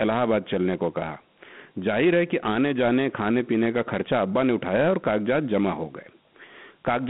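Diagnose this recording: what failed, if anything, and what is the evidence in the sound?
Dialogic VOX ADPCM codec damage throughout: speech confined to roughly 150 Hz–3.4 kHz, nothing above 3.8 kHz, with gritty hiss tracking the speech, not steady line noise, fitting 4-bit ADPCM at 32 kbps.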